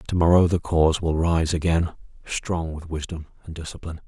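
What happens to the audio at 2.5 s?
At 2.5 s the speech has just dropped abruptly by about 6 dB. The drop begins at 2.44 s and lasts to the end of the clip. The likely cause is one channel dropping out: one side of the stereo pair goes silent, so in the mono sum the material shared by both sides falls to half its amplitude. A fade or gain change would ramp or scale the whole mix evenly, whereas here the step is instant.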